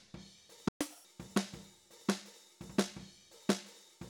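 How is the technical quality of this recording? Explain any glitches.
Two linked glitches stand out near the start, a brief dropout followed by a sped-up passage.

At 0.68 s the sound cuts to silence for about 120 ms, resuming at 0.81 s. This playback stall is most likely the player running short of data or its thread being held up, so output simply halts until it recovers. Unlike a dropout from a damaged file, the sound stops cleanly in mid-flow and then carries on.

From 0.81 s to 1.05 s comes catch-up at higher speed. The player works through its backlog by resampling at 1.5 times normal rate, so both tempo and pitch jump, by roughly seven semitones, before returning to normal. What separates this from a deliberate pitch shift or a time-stretch is that speed and pitch rise together, and only for a short stretch right after the silence.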